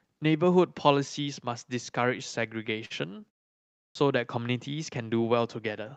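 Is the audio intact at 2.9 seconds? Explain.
No. At 2.9 seconds there is a short stall from a late packet. Between 2.85 and 2.92 s a packet failed to arrive on time, the jitter buffer ran dry, and the receiver stretched the last stretch of sound for about 49 ms until the packet turned up, then resumed where it left off. Nothing is lost, but that moment is held slightly too long, with a faint buzz or dip, and everything after it runs about 49 ms later.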